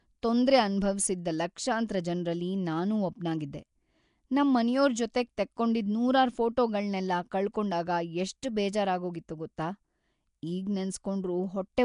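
Throughout, likely Nellymoser compression starved weak bands of bits and filled them with noise. The speech sounds plainly rough, hissy and smeared, with nothing above 10.6 kHz.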